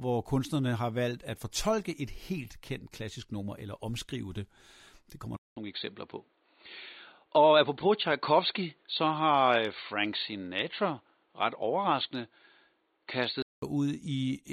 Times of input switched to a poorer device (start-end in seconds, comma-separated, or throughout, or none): 5.36-13.62